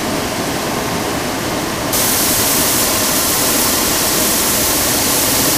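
From 1.93 s to the end, pre-emphasis is left on: the 75 µs FM treble boost was never undone, lifting 10 kHz about 14 dB, making the sound thin, bright and hissy.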